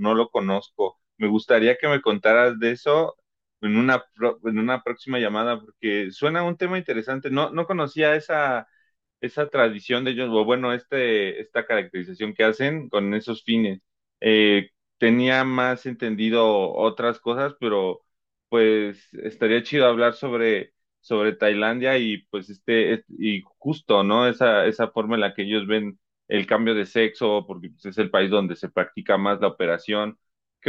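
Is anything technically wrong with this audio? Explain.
Yes, there's a resampler restarted on every block, and it runs the whole clip. Each 20 ms chunk gets converted in isolation during a 48 kHz to 44.1 kHz conversion, so every edge picks up a small error. That gives a 50 Hz buzz riding under the speech.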